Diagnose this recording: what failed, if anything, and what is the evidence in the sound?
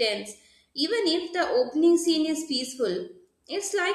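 No fault found in this recording.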